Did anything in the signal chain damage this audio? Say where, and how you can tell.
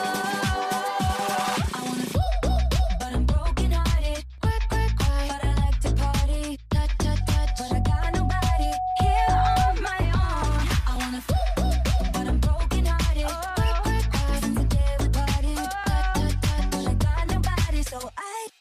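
Yes. Loudspeaker feedback squeal from 7.20 to 9.78 s. A 741 Hz tone swells over about two seconds to roughly 5 dB above the sound. The microphone was re-amplifying its own loudspeaker.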